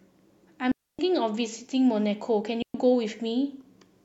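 A digital wireless link lost too much data twice in this speech, and each time the receiver muted the output rather than play corrupted audio. This is a digital wireless dropout. From 0.72 to 0.99 s the speech falls into a clean hole of near silence lasting about 270 ms, and from 2.62 to 2.74 s a shorter gap of about 120 ms follows. Both mutes fade in and out very quickly, with no crackle or noise burst at either edge.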